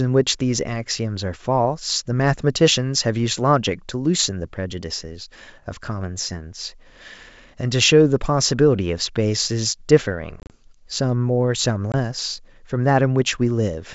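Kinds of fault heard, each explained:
Packet loss on an ADPCM call: the speech breaks into hard-edged silent gaps, first a cluster between 10.40 and 10.56 s, about 80 ms lost across 100 ms with no hole longer than 30 ms, then 20 ms lost at 11.92 s. Lost packets are filled with silence, and the decoder's adaptive predictor and step size drift from the sender's, so the sound resumes slightly distorted before settling.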